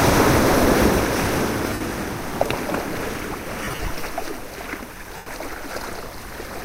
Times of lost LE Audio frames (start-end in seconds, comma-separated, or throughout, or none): 1.64-1.81, 3.64-3.92, 5.16-5.27